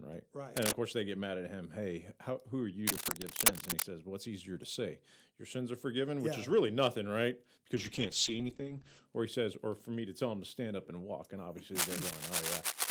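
At 0.57 to 0.74 s, 2.87 to 3.85 s and 11.75 s to the end, cable scratch noise appears: rough, crackling bursts, a little louder than the speech, then level with it at the end. A worn connector being moved is the likely cause. From 7.77 to 9.11 s, a call bitrate drop leaves the speech rough and muffled, with the top end falling from 20 kHz to 8 kHz. The coarseness fits an encoder pushed from around 32 down to about 9 kbps.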